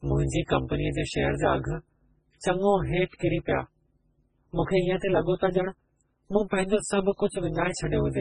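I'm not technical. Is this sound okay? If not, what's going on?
No. Throughout the speech there is overlap-add ripple: the processed audio was rebuilt from short pieces that don't blend evenly, so the level pulses about 200 times a second, giving a metallic buzz. The speech also sounds watery and swirly with smeared onsets, and nothing remains above about 10.2 kHz, heavy damage likely caused by MP3 compression at a low quality setting.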